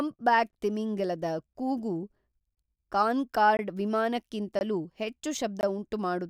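A gap between chunks cuts the speech at 0.51–0.53 s, just before "ತಿಮಿಂಗಿಲದ ಕೂಗು", then at 1.53–1.55, 2.55–2.57 (after "ತಿಮಿಂಗಿಲದ ಕೂಗು"), 3.57–3.59, 4.59–4.61 and 5.61–5.63 s. Each 20 ms hard-edged hole marks a join between 1.0 s chunks played with inserted silence.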